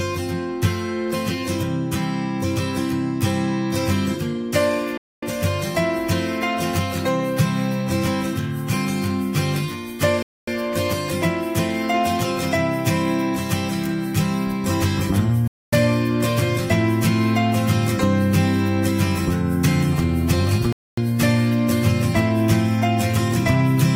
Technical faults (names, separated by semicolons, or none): gap between chunks